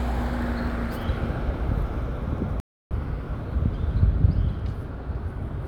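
At 2.6 s the sound cuts out for about 309 ms, a playback stall, likely the player starving for data, then resumes at 2.91 s.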